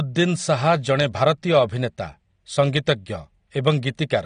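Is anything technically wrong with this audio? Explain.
Yes. Throughout the speech the top end is missing, with nothing above 9.7 kHz, so the sound is dull and smeared, and sibilants and sustained sounds carry a fizzy, warbling texture. This is likely AAC compression, the AAC-LC form, at a low setting that fits a bitrate of around 32 kbps. To save data, the encoder lowers its cut-off frequency and quantises each frame's spectrum coarsely, leaving gaps that come and go from frame to frame.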